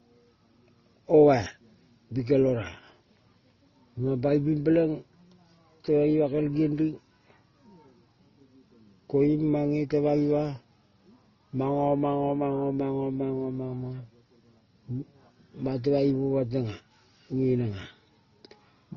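Speech runs the full clip with nothing above 6.4 kHz, and the artefacts of two codecs are heard together. That mix is likely transcoding between lossy codecs, fitting MP3 near 24 kbit/s followed by Opus, unlike a single low-bitrate codec.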